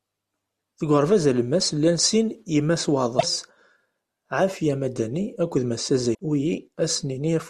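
At 3.16 s the speech breaks up through 3.23 s, and at 6.11 s there's a second break through 6.19 s. Both are damaged data in a compressed stream: a stretch of bytes in the encoded file got corrupted, so the decoder misread those frames, lost sync and had to hunt for the next valid frame header. What you hear is a brief glitch of roughly 80 ms.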